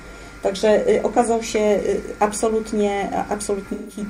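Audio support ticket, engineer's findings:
AAC frame loss with concealment, 3.72 to 4.00 s. Gap of about 170 ms, which fits roughly four lost AAC frames. Decoder rebuilt the missing span from the last good spectrum. Component: decoder concealment. Patch sounds smeared, noisy or phasey.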